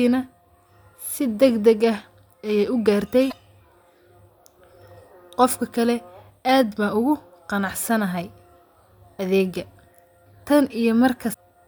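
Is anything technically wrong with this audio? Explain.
Yes, there's damaged data in the compressed stream, twice: around 3.28 s and again near 11.30 s, each lasting only about 50 ms. In both spots some of the encoded bytes are wrong, so the decoder can't make sense of those frames, loses its place, and has to hunt for the next valid frame header before the speech picks back up. You hear it as a quick chirp, squawk, click or short hole cutting into the speech.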